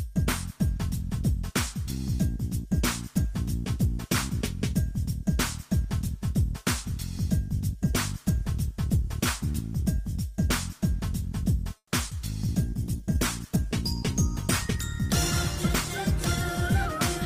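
From 11.77 to 11.94 s there is a call audio freeze, likely from packets held up in transit until the jitter buffer ran dry. The last sound is stretched into a fading buzz or hiss, ending in about 60 ms of silence. On a spectrogram this shows as smeared horizontal streaks that thin to a blank strip. The audio then resumes where it stopped, so nothing is lost but everything after arrives about 150 ms later.

Shortly after, at 12.10 s, comes a short concealed packet loss. About 40 ms of audio never reached the decoder in time. Only about 10 ms of synthesized fill bridges the hole before the real signal returns, so the timeline tightens by roughly 30 ms. It is heard as a quick smear. The spectrogram shows a brief blurred seam.

From 12.63 to 16.93 s the call bitrate drops from 48 kbps to 16 kbps and stays at the lowest rate for about 2.5 s. The encoder has far fewer bits to work with, so the sound turns rough and watery. 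On a spectrogram the fine detail coarsens into blotchier, less defined energy until the rate recovers.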